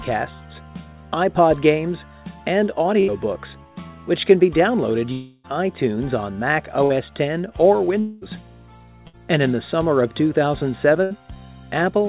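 At 3.0 to 3.1 s, 6.84 to 6.92 s, 9.07 to 9.15 s and 11.03 to 11.12 s, a burst of packet loss removes 60 to 80 ms each time. The receiver stretches the last sound into a brief fading buzz or hiss, which shows as smeared, repeating waveform cycles, then a jump forward.

At 5.12 to 5.46 s and 8.0 to 8.23 s, a longer gap of about 0.3 s and 0.2 s is likely a long network dropout. Concealment fills the whole stretch with a decaying buzz or hiss that looks smooth and steady on a spectrogram, and the audio resumes later with content missing.

Throughout, the call codec leaves nothing above 4 kHz, a sharp ceiling that fits a 64 kbps G.711 mu-law path.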